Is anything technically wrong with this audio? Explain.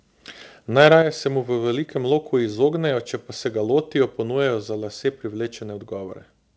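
Yes. There are two faults, close together.

From 0.79 to 0.96 s there is microphone overload. The peaks were driven about 6 dB past full scale, so their tops are flattened. A small share of the samples are clipped. This is likely an input set too high, and it adds a harsh, crackling edge to the loudest speech.

At 1.02 s the microphone volume is stepped down. The level drops by about 6 dB in one step, for both the voice and the background. The likely cause is the call software reacting to the clipping just before it by lowering the input volume.

Above all of this, the call codec cuts everything above 8 kHz.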